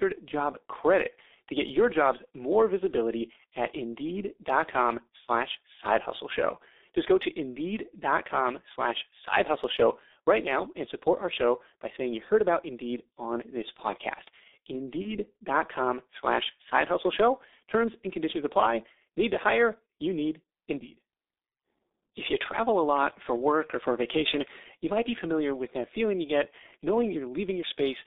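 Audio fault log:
throughout: G.723.1 codec. The speech passes through a very low-rate telephony codec, heavy enough to suggest the 6.3 kbit/s mode, inside a line band of 300 Hz to 3.7 kHz. Each 30 ms frame carries only a coarse model of the voice that changes slowly, and everything above 3.7 kHz and below 300 Hz is missing. The speech is muffled, thin and hoarse, and consonants smear into each other.
15.02–15.16 s: VoIP packet loss concealed by the speech codec. About 30 ms of audio went missing, which fits a single lost 30 ms frame. The decoder filled the gap by extending its last pitch and spectral shape at falling gain, so the sound briefly turns into a buzzy tone or a coloured noise that fades. Because each decoded frame depends on the one before, the voice stays weak or distorted until about 15.16 s.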